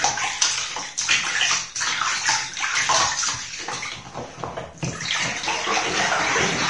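Right through the clip there's audible Vorbis compression: nothing above about 10.6 kHz, and the coarsely quantised treble turns grainy and hissy, which likely points to a low bitrate around 34 kbps.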